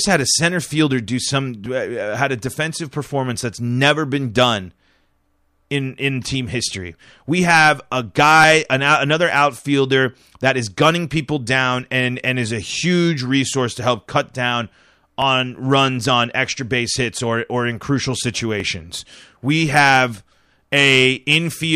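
From 1.66 s, after "center fielder do some", to 20.3 s, a click recurs every 1.69 s, likely from clock drift buffer slips. Each appears as a thin vertical spectrogram line and a waveform discontinuity.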